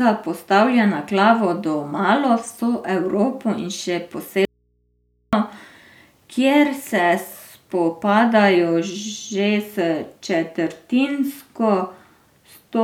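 Speech that cuts out abruptly from 4.45 to 5.33 s, leaving only faint hum far below the voice: an audio dropout to a faint residue, likely a signal break with the input left live.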